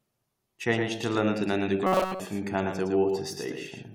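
From the very start the speech carries a doubled audio track, a full-band copy trailing by roughly 100 ms and about 5 dB quieter, likely a second, slower capture path. Between 1.87 and 2.20 s it becomes robotic, a rigid metallic buzz at 188 Hz, likely from a short buffer of about 5.3 ms being repeated in place of nearly all the real audio.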